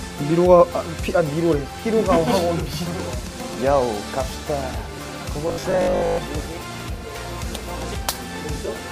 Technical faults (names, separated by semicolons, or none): robotic sound from repeated short buffers